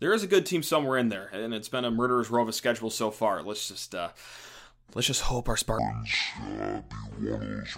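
From 5.79 s to the end, the speech runs at about half speed (0.524x), a section at the wrong speed, likely from playback on the wrong clock. Pitch drops roughly ten semitones, making it deep and slow. Spectrogram harmonics shift lower and spread out in time, and waveform envelopes stretch.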